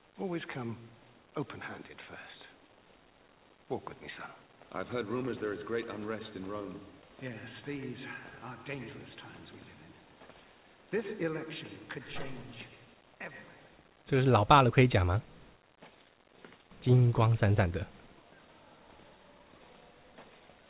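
No technical faults can be heard; the audio carries the ordinary character of a WebRTC call path, with nothing above 4 kHz, as fits a G.711 mu-law telephone-band codec.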